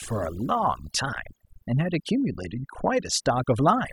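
Throughout, overdone noise removal strips individual frequency bands near the noise floor, so quiet parts of the speech drop out over twinkling near-silence, unlike a gate's whole-signal muting.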